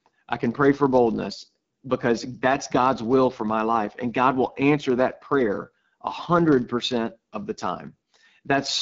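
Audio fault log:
throughout: block size mismatch (padded). A steady buzz at 43.1 Hz runs under the speech, which fits 1024-sample reads being topped up with zeros. Each block carries only a very short silent gap, so playback runs at 0.999 times normal speed and pitch holds.
throughout: AMR wideband (HD Voice) codec. The speech sounds rough and raspy, with plainly audible coding damage, which fits one of the two lowest AMR-WB rates, such as 8.85 kbit/s. The top band is filled with shaped noise rather than real detail, and nothing reaches above 7.6 kHz.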